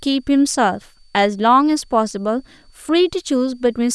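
A switching supply whistle runs under the speech throughout. A switching power supply is cycling at an audible rate. The result is a thin, high tone that wanders between about 4.5 and 4.6 kHz. It sits roughly 45 dB below the speech.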